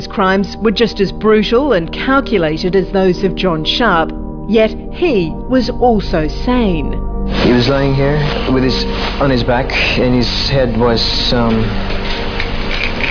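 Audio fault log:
Nothing to log here, as the audio comes across without any technical problem worth noting anywhere in it.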